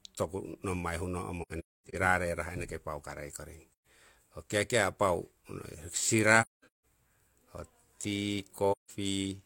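A speech clip with AAC frame loss with muting at four points. The speech drops out softly at 1.42 to 1.95 s, 3.73 to 3.87 s (just after "paukarei koring"), 6.41 to 6.84 s and 8.71 to 8.90 s. Lost frames are decoded as silence. Overlapping windows fade each gap out and back in, so the holes are soft-edged. The first and third gaps are broken, with runs of roughly 300 ms and 200 ms.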